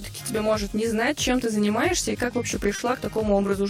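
Throughout the clip there is channel delay with comb filtering. One channel lags the other by around 20 ms, and when the two are summed to mono, shared content cancels at regularly spaced frequencies starting near 30 Hz. The result sounds rough or slightly doubled. A spectrogram shows fixed horizontal notch stripes at even intervals.

From 2.75 to 2.81 s there is a short stall from a late packet. A packet arrived about 30 ms late, so the receiver held the preceding sound for 30 ms before resuming where it left off, with nothing lost. It comes across as a brief, faintly buzzy hold. The waveform shows a short repeated stretch, and the spectrogram shows a smeared band with no gap.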